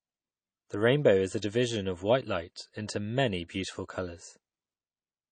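Throughout the speech, nothing sounds above about 9 kHz, and what remains has a watery, swirly quality, with weak detail flickering in and out and consonant attacks smeared. That is likely MP3 compression at a low bitrate, around 32 kbps. A plain low-pass filter would dull the treble without this flicker.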